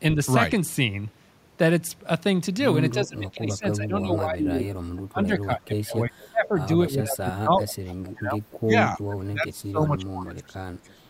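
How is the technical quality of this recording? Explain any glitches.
The recording has two recurring glitches in the speech.

Speech suppressed in double talk: at 2.94–4.7, 5.09–6.72, 6.91–8.41 and 8.61–11.09 s, the voice dips by up to about 30 dB. An echo canceller likely muted it while both sides talked.

Echo leak: at 4.97–5.01 and 7.89–8.11 s, a faint copy repeats about 317 ms late. A loudspeaker echo likely slipped past cancellation.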